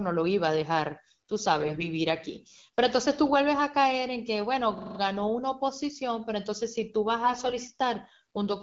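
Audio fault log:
1.60 to 1.88 s and 7.22 to 7.54 s, AMR bit errors: on a weak link the lightly protected bits of the AMR-WB frames arrived flipped, around 3 percent in the first burst and about 5 percent in the second, while the checksum on the core bits still passed. The excitation pulses land in wrong places and the fine pitch, gain and spectral values drift, so the speech holds its pitch and level but turns hoarse, scratchy and gargly for those stretches.
4.78 to 4.99 s, system hang loop: the system or driver stalled while the sound hardware kept replaying the same ring buffer, a 42.67 ms slice that fits a 2048-sample buffer, five times over. That exact repetition at 23.4 Hz comes across as a rapid machine-gun stutter.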